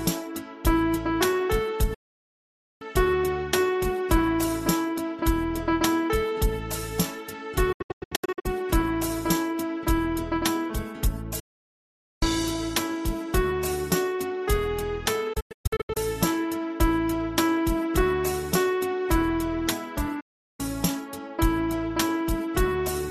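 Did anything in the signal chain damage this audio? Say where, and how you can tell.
Yes: a digital broadcast dropout at the reception stage. The receiver lost valid frames and muted, fading out within 8 ms, at 1.94–2.82, 7.72–8.46, 11.39–12.23, 15.33–15.97 and 20.20–20.60 s. The second and fourth break into short scattered holes. Programme sent meanwhile is gone.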